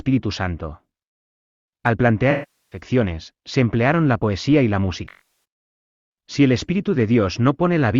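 AAC frame loss with concealment occurs first from 2.31 to 2.80 s, where about 405 ms of coded audio drops out. The decoder rebuilds the gap from the last good spectrum with scrambled signs or interpolated energy, so the speech smears into a noisy, phasey wash that fades as the loss continues. It recurs at 5.04 to 5.28 s, just after "la poesía y la". There the losses are scattered over roughly 430 ms, and the longest break is about 300 ms.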